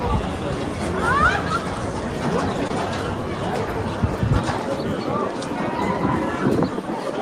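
A short concealed packet loss sits at 2.67 to 2.72 s. Roughly 20 ms of the stream failed to arrive in time, and the decoder papered over it by extending the preceding sound for about 21 ms before crossfading back into real audio. That is why the spot comes across as a brief smear or wobble rather than silence. A plain dropout would leave an audible hole, and a glitch click would be a sharp tick with no stretched sound.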